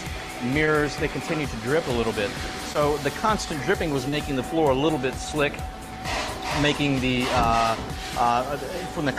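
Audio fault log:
0.65–0.69 s, 2.73–2.77 s, 4.09–4.14 s, short concealed packet loss: 20, 20, 40 ms missing, refilled by extending prior sound; brief smears, shown as copied harmonics or smoothed waveform.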